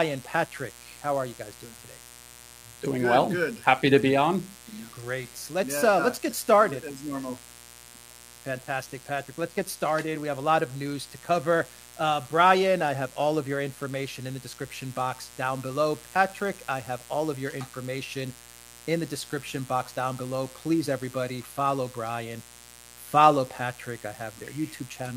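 A mains buzz runs through the whole clip: switching spikes from the 60 Hz mains leak in, giving a steady, raspy harmonic rasp sitting roughly 25 dB under the sound.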